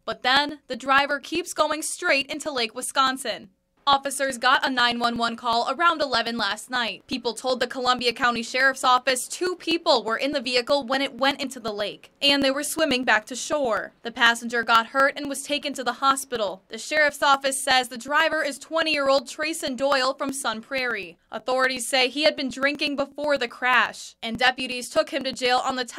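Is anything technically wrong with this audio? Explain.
Yes. From 0.12 s to 25.83 s there are periodic USB or driver dropouts: every 0.123 s, roughly 2 ms of audio is skipped as the bus or driver stalls, producing regular ticks wherever there is signal.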